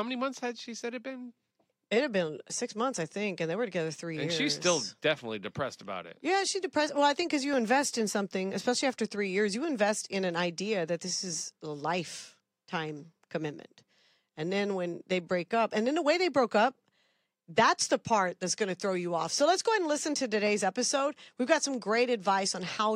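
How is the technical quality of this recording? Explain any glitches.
The recording is marred by a regular clicking fault. From 2.36 s to 20.47 s, clicks recur every 2.59 s. These are clock drift buffer slips, likely from two devices whose clocks disagree by around 70 ppm, forcing a handful of samples to be dropped or repeated. Each slip appears as a thin vertical broadband line on a spectrogram and a tiny step in the waveform.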